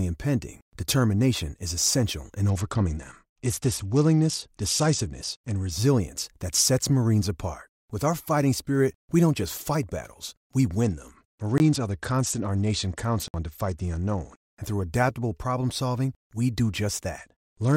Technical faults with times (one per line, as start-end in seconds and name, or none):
2.49-5.71 Bluetooth SBC bit pool drop
10.84-14.37 Bluetooth SBC bit pool drop
11.58 block of digital silence
13.28-13.34 block of digital silence
17.18-17.77 Bluetooth SBC bit pool drop